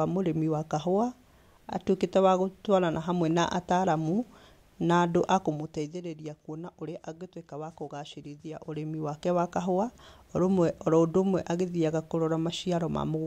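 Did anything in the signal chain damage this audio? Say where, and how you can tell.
No, nothing in the signal chain has damaged this speech recording. The level rises and falls gradually in places, as a fader would move it, and those changes are smooth.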